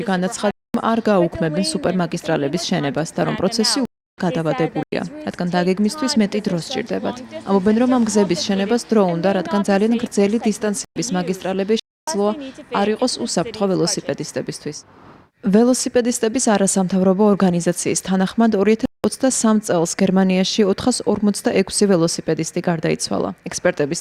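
The program likely failed repeatedly to fill its output buffer in time, so whole blocks of samples were left as zeros: a block of digital silence at 0.51, 3.85, 4.83, 10.85, 11.80 and 18.86 s. These holes last from about 93 ms to 326 ms; the 4.83 s gap fits a 4096-sample buffer, the 18.86 s gap an 8192-sample one. Each time the sound drops abruptly to dead silence and returns without a fade.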